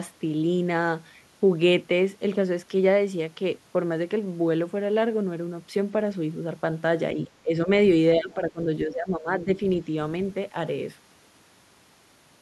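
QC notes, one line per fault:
7.15–7.69 s, 8.16–8.59 s, 8.85–9.49 s: speech suppressed in double talk. The speech dips in level in short patches, falling by roughly 15 dB at worst. Within each span only part of the sound is pulled down: a brief piece in the first, more in the second, and most of the third. The likely cause is an echo canceller meeting simultaneous talk from the far end. It mistakes the near speech for echo and ducks it.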